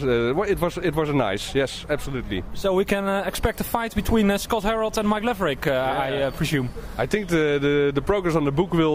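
There are no technical faults to describe at any point in this audio.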